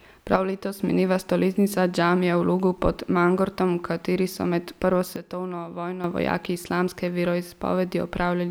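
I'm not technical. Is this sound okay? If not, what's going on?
No. The speech twice drops abruptly in volume, background included, from 0.36 to 0.8 s, ending just before "mineva stoletnica džamije v", and from 5.16 to 6.04 s, between "kateri so med prvo" and "vojaki islamske". This is a sudden gain jump, likely from a level setting applied instantly rather than faded in.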